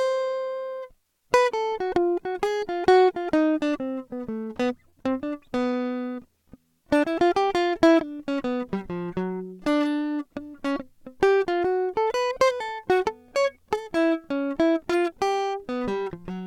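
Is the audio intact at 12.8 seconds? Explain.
Yes, at 12.8 seconds the music plays through intact, with no dropout, click, distortion or other technical fault at that moment.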